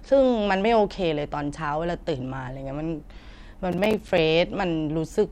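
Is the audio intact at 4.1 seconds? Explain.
No. From 3.72 to 4.18 s there is processor overload crackle: the processor misses deadlines on around ten short buffers of a few milliseconds each, leaving hard-edged silent gaps. Unlike a single dropout, these cluster into a gritty crackle that stops once the overload passes.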